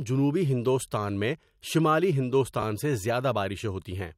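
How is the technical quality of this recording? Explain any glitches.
The recording has one glitch. From 2.59 to 2.63 s, chunks are out of order: a 10 ms chunk plays three chunks late, producing a brief jumbled stutter. The waveform shows three abrupt discontinuities, which appear as thin vertical lines on a spectrogram.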